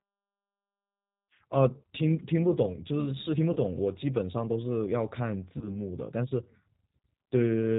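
Throughout, the speech is band-limited and slightly rough and synthetic, with nothing above 4 kHz. That is G.729 codec damage, plainly audible. The decoder rebuilds each 10 ms frame from a vocal tract filter, pitch predictor and sparse pulses, which fits an 8 kbit/s G.729A stream.

From 3.53 to 3.58 s, and again from 5.58 to 5.75 s, the sound smears into a buzzy tone or coloured noise that fades, and stays weak or distorted briefly afterwards. This is VoIP packet loss concealed by the speech codec. Each event points to one lost packet, about 30 ms of audio. The decoder extrapolated from its last pitch and filter with falling gain, and recovery lagged because each frame builds on the last.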